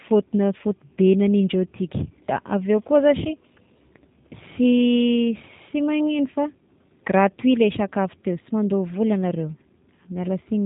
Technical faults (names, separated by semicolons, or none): G.729 codec